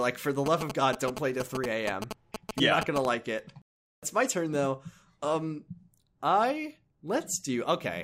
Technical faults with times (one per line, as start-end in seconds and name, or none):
0.46-3.06 GSM signalling bursts